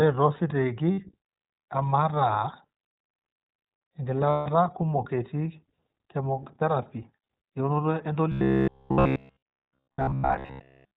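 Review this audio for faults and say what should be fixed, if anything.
iLBC codec, throughout the clip: the speech is confined to narrowband, with nothing above 4 kHz, so it sounds dull and boxed in, and it has a plainly audible rough, slightly synthetic edge. Each 20 ms frame's excitation is coded on its own, and the thinness fits iLBC's 15.2 kbps mode. Prevention: carry this path on a wideband codec such as Opus instead of iLBC.

Lost iLBC frames, at 0.92 to 0.98 s (60 ms) and 4.30 to 4.47 s (160 ms): in each gap the decoder fills the missing packets by repeating the last pitch cycle mixed with noise, producing a held, buzzy, breathy vowel. The longer gap at 4.30 s fades. Because iLBC frames stand alone, normal speech returns almost immediately afterwards. Prevention: reduce packet loss on the network path or add forward error correction so lost frames can be rebuilt.

Robotic sound from repeated short buffers, from 8.32 to 10.96 s: the speech turns into a rigid, metallic buzz at a fixed 66.7 Hz that still loosely tracks the syllables. 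Most of the real audio in this stretch is skipped. The likely cause is audio arriving too seldom, so the software keeps replaying its last short buffer. The 15 ms period fits a 15 ms buffer. Prevention: increase the buffering or fix the delivery stall so fresh audio arrives on time.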